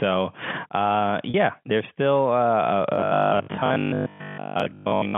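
Packet loss with pitch repetition occurs at 1.30 to 1.34 s. About 40 ms of audio goes missing, which fits two 20 ms packets. The receiver covers the gap by repeating the last pitch period instead of leaving silence. Because the gap is so short, the repetition never fades to quiet. It is heard as a brief held, slightly buzzy note within the telephone-band speech, which sits between 150 Hz and 3.4 kHz.

Robotic sound from repeated short buffers runs from 2.94 s to 5.16 s. A rigid, metallic buzz at 50 Hz replaces the natural voice quality, though the speech still roughly follows its own contour. The cause is likely audio arriving too seldom, so the software keeps replaying its last stretch, about 20 ms long, while most of the real signal is skipped. That fixed loop length sets the 50 Hz pitch.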